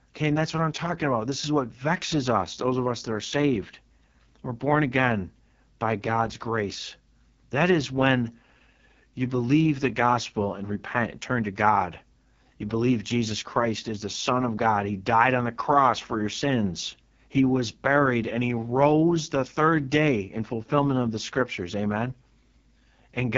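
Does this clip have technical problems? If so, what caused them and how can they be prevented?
Yes. The whole clip carries heavy AMR wideband (HD Voice) codec damage. Nothing is present above 7.4 kHz. The speech sounds rough and raspy. That roughness fits the lowest 6.6 kbit/s mode, where the vocal tract model gets too few bits per frame. To prevent it, use 12.65 kbit/s or higher.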